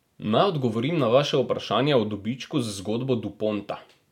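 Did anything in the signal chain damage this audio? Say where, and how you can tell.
No, nothing along the chain shows up as damage in this speech recording; every stage passes it without a mark I can point to.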